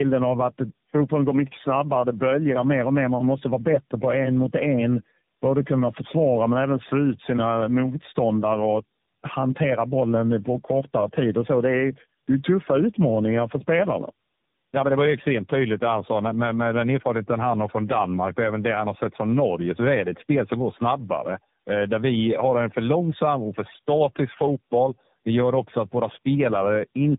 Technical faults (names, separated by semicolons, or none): tandem speech coding